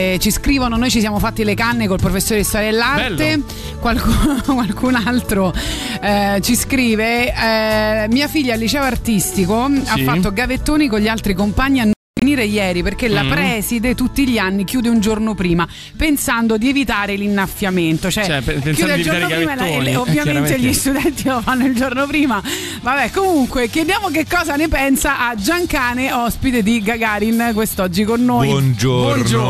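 At 11.93 s the sound cuts out in a digital broadcast dropout, returning at 12.22 s. The receiver lost good frames and muted. About 264 ms of programme vanishes in short holes over 288 ms. The longest gap runs 240 ms. That material is gone.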